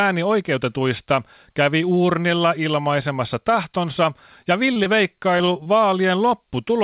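Short concealed packet loss hits after "kävi uurnilla ilmaisemassa tahtonsa", at 4.44–4.48 s, then twice after "uurnilla ilmaisemassa tahtonsa ja", at 4.74–4.78 s and 4.84–4.87 s. Each time about 20 ms of audio never arrived. The receiver stretched the previous sound to cover it, leaving a brief smear or wobble.

Repeated packet loss follows from 5.38 to 5.68 s. Four short gaps, the longest 21 ms, are patched one after another. This gives a choppy, robotic stretch. Nothing above 4 kHz survives the narrowband call path, which fits a G.711 codec.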